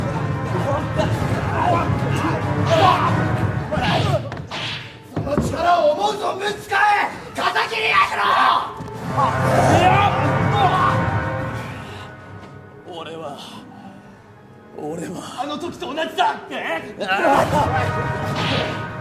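No faults detected; nothing in the audio needs attention.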